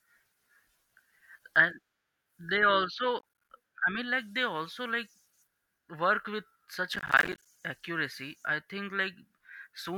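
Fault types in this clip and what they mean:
Processor overload crackle: the processor falls behind and misses deadline after deadline, and each miss drops a tiny silent hole, which points to blocks of roughly 10 ms. That's the gritty tearing at 3.19 to 3.50 s, and a longer burst at 6.94 to 7.46 s.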